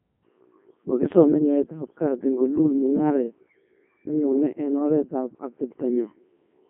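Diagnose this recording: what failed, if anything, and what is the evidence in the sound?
The codec stage is where it went wrong: this is speech squeezed through a Codec 2 vocoder, and it stays that way for the whole clip. It sounds robotic and buzzy throughout, confined to a phone-style band of roughly 150 Hz to 3.4 kHz, with nothing at all above 3.6 kHz. Codec 2 only sends pitch, voicing, energy and a spectral envelope, then rebuilds the voice from sine waves, so the real waveform never arrives. The damage is heavy, even at its top 3.2 kbit/s mode.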